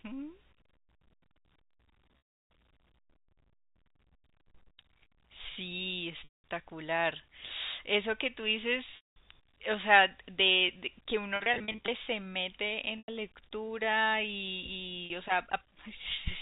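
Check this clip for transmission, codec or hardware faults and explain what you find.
Packet loss with pitch repetition breaks the speech six times, heard over G.711 telephone coding with its 4 kHz ceiling. At 2.22–2.42, 6.24–6.44, 8.96–9.16, 11.36–11.88, 12.98–13.08 and 15.06–15.10 s, the voice briefly freezes into a held, buzzy tone, and in the longer gaps it fades to silence before the speech cross-fades back. The 11.36–11.88 s event is choppier: about 220 ms goes missing across 520 ms, in runs no longer than 40 ms. The receiver bridges each gap by repeating the last pitch period and fading it out, and the gap lengths fit 20 ms packets.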